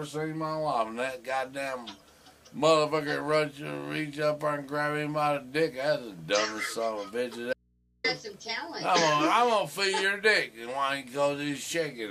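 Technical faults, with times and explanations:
7.53 to 8.04 s, audio dropout to a faint residue: the sound cuts off abruptly and stays gone for about half a second. The gap is not silent. A low mains hum sits there, roughly 40 dB below the normal level. The wanted signal likely dropped out while the input stayed open and live, so only the hum got through. There is no fade at either edge, so this is not a pause.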